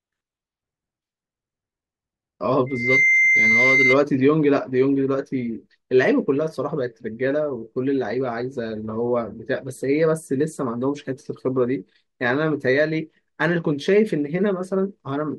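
From 2.66 s to 3.98 s a single tone near 2.1 kHz swells over roughly a third of a second into a squeal standing about 5 dB above the speech. This is loudspeaker feedback squeal: the microphone picked up its own loudspeaker, and loop gain exceeded one at that frequency.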